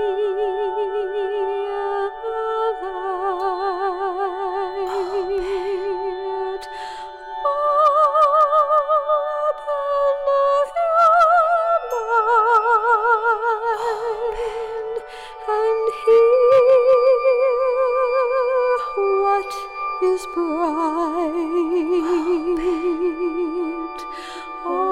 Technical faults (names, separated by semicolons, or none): hard clipping